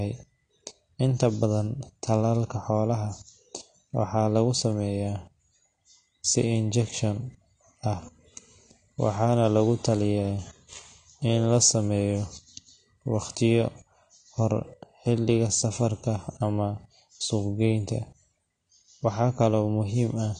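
From start to finish the speech sounds dull and smeared, with nothing above about 9.7 kHz, and sibilants and held vowels carry a plainly audible warbling, fizzy edge that stays audible the whole way through. The likely cause is AAC compression at a low bitrate, which fits AAC-LC at roughly 32 kbps: the encoder drops the top of the spectrum and quantises what remains so coarsely that gaps and swirling artefacts form around sustained sounds.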